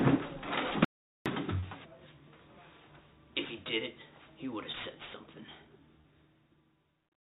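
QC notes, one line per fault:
0.85–1.26 s, audio dropout to silence: the sound cuts out for about 0.41 s, leaving dead silence with no room tone. The input was likely lost, through a disconnect, failed link or mute.
1.60–1.64 s, 4.72–4.75 s, 6.01–6.06 s, short concealed packet loss: about 20 ms failed to arrive each time. The receiver extended the preceding sound, then blended back, giving a brief smear.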